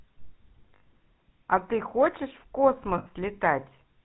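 Speech coded with the GSM full-rate codec runs the whole way through, and the damage is plainly audible: a buzzy, gravelly roughness from the pulse-driven excitation that keeps only one sample in three, with a hard ceiling at 4 kHz. On a spectrogram everything above 4 kHz is empty and the harmonics look smeared and grainy. The roughness and the band limit both fit a 13 kbps stream. Lost GSM frames break in twice, from 0.76 to 0.82 s (60 ms) and from 2.98 to 3.06 s (80 ms). Each time, the last good frame's settings are repeated, so the sound freezes into a rough, metallic ring. These gaps fit three and four dropped frames of 20 ms each. On a spectrogram they show as short stretches of frozen, repeating spectral texture. In the waveform they show as a brief stretch of repeated cycles.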